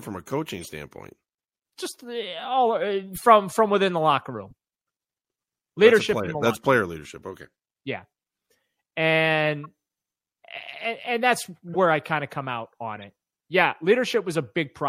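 Speech with a watery, swirly top end and dulled treble throughout, with the damage plainly audible, which points to MP3 compression at something like 64 kbps. Short chirpy bursts of noise land at 0.60–0.68, 3.13–3.24, 4.50–4.53, 9.63–9.66, 11.69–11.76 and 12.96–13.03 s, where a corrupt frame decoded anyway sprayed energy into the wrong frequencies. They are faint around 4.5 s and loudest around 3.2 and 11.7 s.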